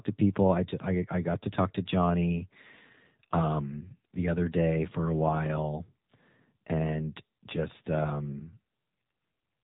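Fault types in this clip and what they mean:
AMR narrowband mobile codec: the speech was coded by a low-rate vocal-tract model, consistent with 7.4 kbps, cutting everything above 3.8 kHz and leaving it buzzy and synthetic.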